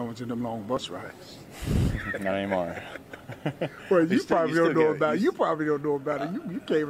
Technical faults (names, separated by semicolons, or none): overlap between stream segments